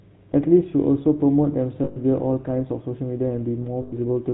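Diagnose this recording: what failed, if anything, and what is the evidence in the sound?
GSM full-rate codec, throughout the speech: the codec stage left a buzzy, gravelly roughness, and there is nothing above 4 kHz. The vocal tract is modelled and driven by a coarse, regularly spaced pulse excitation, a sound that fits 13 kbps full-rate coding.

Lost GSM frames, at 1.84 s for 120 ms and at 3.82 s for 100 ms: at both points the sound freezes into a rough, metallic ring. This points to frames lost on the network, with the decoder repeating the last good frame at falling level to conceal each gap.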